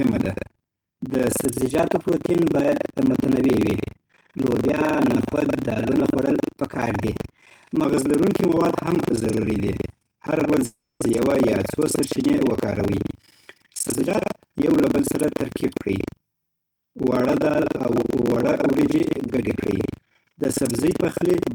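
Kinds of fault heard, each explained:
buffer tearing: A robotic buzz at 23.4 Hz runs throughout, fitting a 2048-sample buffer. Roughly a third of each buffer replays audio about 150 ms old, showing as regular vertical splice lines.
call audio freeze: From 10.65 to 11.02 s, before "یوه یا څو سرچینې", sound smears into a fading buzz, then about 210 ms of flat silence, likely from late packets.
jitter buffer speed-up: From 13.69 to 16.65 s, ending before "وړه دال او وړه", speech runs about 11% faster at unchanged pitch. Harmonics stay level while syllables crowd closer together.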